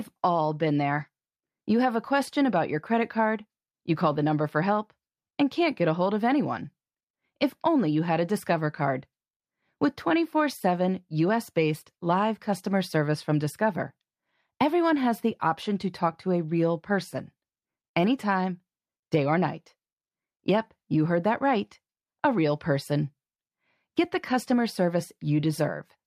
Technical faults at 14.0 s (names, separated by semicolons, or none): none